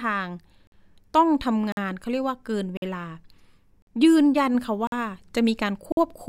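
The speech has a gap between chunks every second, at 0.67, 1.72, 2.77, 3.82, 4.87 and 5.92 s. Each is a 50 ms hole at the join between chunks.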